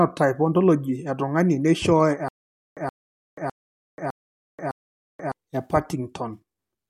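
From 2.28 s to 5.32 s the speech breaks into a stutter with silent gaps: one 124 ms fragment plays five times, each followed by about 483 ms of dead digital silence, so the burst returns every 607 ms. The likely cause is a stalled player or stream replaying its last buffered piece on each retry. Unlike a simple dropout, the same fragment keeps coming back, and unlike an echo, nothing overlaps. The speech that belonged in that span is lost.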